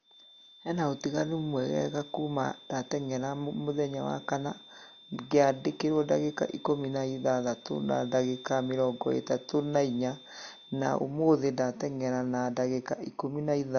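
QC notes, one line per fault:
throughout, transcoding between lossy codecs: likely an MP3 encode re-encoded as Opus, so both codecs' artefacts stack audibly and nothing remains above 6.7 kHz.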